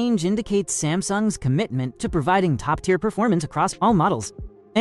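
Processing software likely compressed the final stretch of the audio to fit a shorter length, keeping the pitch intact by discarding small slices of the waveform instead of simply playing it faster. The result is a time-stretched section running from 2.65 s to the end, sped up by a factor of about 1.38. The pace jumps abruptly at 2.65 s while the pitch holds steady, and the sound turns rushed.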